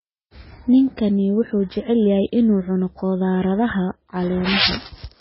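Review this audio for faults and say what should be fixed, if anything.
Throughout the whole clip the speech has nothing above 5.6 kHz and a heavily watery, swirling texture, which is likely MP3 compression at a very low bitrate, fitting roughly 16 kbps. Short of bits, the encoder cut the treble at a fixed frequency and zeroed weak frequency lines, so those components flicker on and off from frame to frame. A spectrogram would show a hard ceiling at 5.6 kHz and speckled, patchy holes below it rather than smooth harmonics. To prevent it, keep an uncompressed or high-bitrate master and encode from that.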